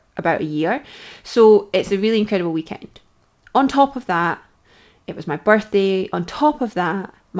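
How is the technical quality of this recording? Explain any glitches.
Nothing stood out as a glitch on listening to this speech, which sounds like it came over a wideband call link, with nothing above about 8 kHz, consistent with a codec such as G.722 at 64 kbps.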